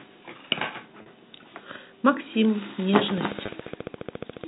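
At 1.02 s, 40 ms of audio is lost to packet loss with pitch repetition. The receiver fills the gap by repeating the last pitch period until 1.06 s. The gap is short, so no fade to silence is heard. The speech just seems briefly held, with a slight buzz. A 40 ms hole fits two lost 20 ms packets.

From 3.11 s to 4.45 s, a train of clicks runs over the speech. There are about twenty of them, evenly spaced at 14.3 per second. They look alike and peak roughly 5 dB above the signal. They sound like steady ticking. The likely cause is electrical interference or a struggling interface injecting pulses.

At 3.46 s, inside the clicks, a second packet loss with pitch repetition covers 20 ms, which points to a single lost packet. The repeated cycle gives another very brief held, buzzy moment. The narrow telephone band of the G.711 coding stays audible throughout.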